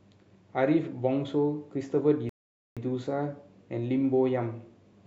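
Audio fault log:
2.29 to 2.77 s, rebuffering stall: the speech drops into dead silence for about 0.47 s, then picks up at exactly the point it left off, with nothing skipped. The player's downloaded audio ran dry, so playback paused until more data arrived, stretching the clip rather than losing any of it.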